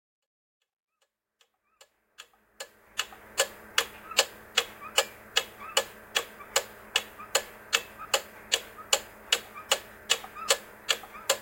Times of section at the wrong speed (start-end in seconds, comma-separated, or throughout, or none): none